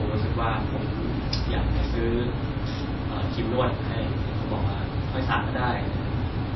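Throughout the speech, nothing reaches above 5.8 kHz and the sound is plainly watery and swirly, with chirping sibilants and smeared onsets. This points to likely MP3 compression at a low bitrate, fitting roughly 24 kbps, where weak frequency lines drop in and out between frames.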